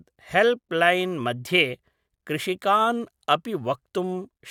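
Nothing in the recording trips up the ear as a technical fault; it simply runs along as speech without anything stepping in to disturb it.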